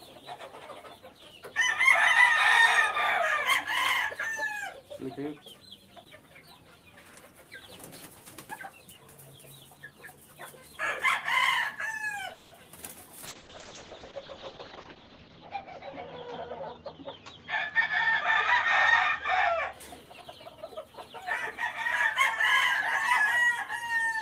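A call audio freeze at 12.33 to 12.53 s interrupts this recording of everyday sounds. For about 180 ms the last sound is carried on as a fading buzz or hiss rather than dropping to silence. Once it resumes, the audio picks up where it stopped, so nothing is lost, but everything after it sits 180 ms later. This points to packets being held up in transit and the jitter buffer running dry, likely the cause here. A call bitrate drop follows from 13.26 to 19.79 s. The encoder's rate falls from 32 to 7 kbps, and the audio bandwidth narrows from 20 kHz to 8 kHz. The sound turns coarse and dull, with the top end gone. It is at its roughest for about 1.6 s at the lowest rate, before the bitrate and the brightness come back. Two jitter buffer speed-ups are also audible. At 14.95 to 15.10 s the sound briefly runs at about 129% speed while pitch stays unchanged, with roughly 50 ms trimmed out. At 20.05 to 20.76 s a gentler hurry of about 111% removes around a tenth of a second. 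In both cases the receiver is cutting short pitch-period slices in quick succession to shrink a buffer that grew too deep, likely after the delayed packets arrived together.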